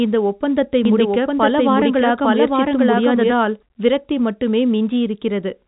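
From 0.85 s to 3.35 s, just after "இந்த ஒப்பந்தத்தை" and ending before "விரக்தி மட்டுமே", the speech is overlaid by a doubled audio track: a second, equally loud copy trailing by about a second, likely from a slower capture path or a misaligned edit. Unlike echo or reverberation, it is one clean copy with no decay or room colouring. It switches on and off abruptly and keeps the same telephone-band sound as the original.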